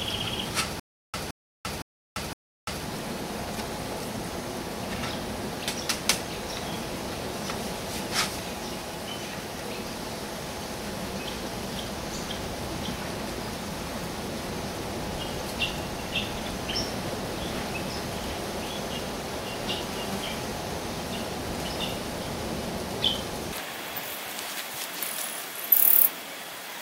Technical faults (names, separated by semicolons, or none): stutter with silent gaps